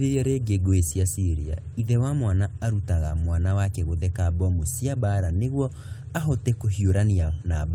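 A speech recording with nothing technically wrong with it.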